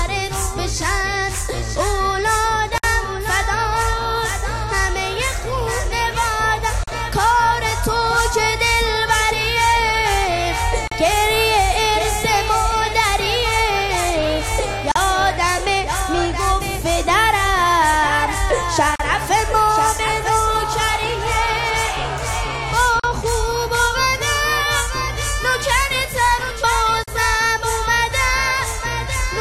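Brief dropouts to silence, with slightly smeared edges, cut into otherwise continuous sound every 4 seconds: about 55 ms at 2.78 s, then about 40 ms at 6.84, 10.88, 14.92, 18.96, 23.00 and 27.04 s. These are gaps at joins of encoded pieces, where untrimmed encoder delay and last-frame padding remain.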